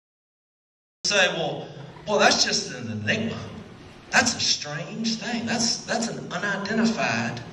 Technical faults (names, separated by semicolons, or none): cut-off start